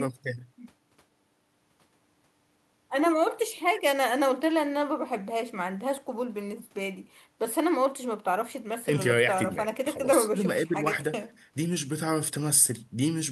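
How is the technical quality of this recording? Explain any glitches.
Nothing stood out as a technical problem on listening to this speech recording.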